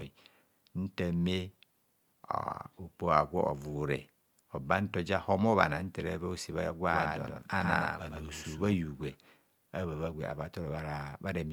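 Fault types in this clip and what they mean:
Doubled audio track: from 6.87 to 8.73 s the speech is heard twice. A second full-band copy trails by about a tenth of a second, around 5 dB quieter, with no decay or room colour, and it starts and stops abruptly, likely from a slower second capture path.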